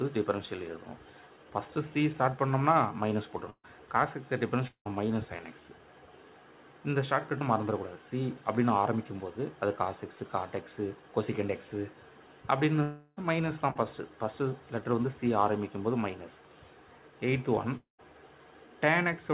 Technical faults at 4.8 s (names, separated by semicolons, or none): long network dropout